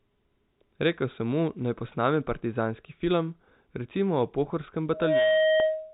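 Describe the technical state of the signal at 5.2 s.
At 5.2 s the speech is overlaid with loudspeaker feedback squeal, which starts at 4.92 s and runs to the end of the clip. The microphone is picking up its own loudspeaker, and at 628 Hz the loop gain exceeds one, so that tone regenerates itself. Unlike a steady interfering tone or hum, it swells from nothing over roughly a third of a second and ends up a few dB louder than the speech.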